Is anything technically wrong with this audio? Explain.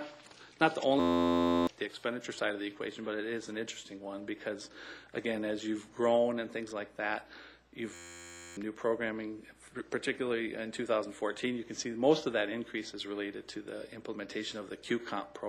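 Yes. There are two system hang loops, from 1.00 to 1.67 s and from 7.94 to 8.57 s. Each time, the system froze while the sound hardware kept replaying the same tiny ring buffer, repeating one 11.61 ms slice dozens of times. That period fits a 512-sample buffer. Because the loop is so short, it repeats at 86.1 Hz and is heard as a steady mechanical buzz rather than a stutter, and roughly 0.7 s of real audio is lost each time.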